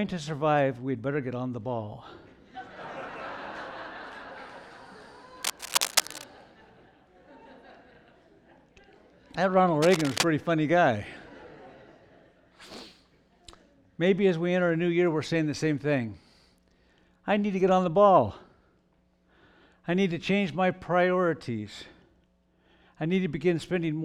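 From 5.43 to 6.24 s, a burst of cable scratch noise sits over the sound. It is dense and uneven, like scratching or rustling. It comes in close to the signal level, only a little below it. It returns from 9.82 to 10.26 s, shorter but just as loud. The likely cause is a worn cable, connector or control being moved. Its contact resistance jumps about rapidly, and that turns into noise.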